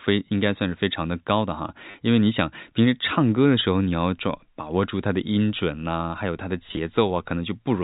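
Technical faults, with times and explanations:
1.91–1.94 s, packet loss with last packet repeated: 30 ms of audio went missing, likely as three 10 ms packets, and the receiver replayed the previous one, producing a brief robotic stutter.
6.69–6.77 s, packet loss with last packet repeated: 50 ms lost in gaps spread over 80 ms, the longest lasting 20 ms, each patched with repeated audio, giving a choppy, buzzy stutter.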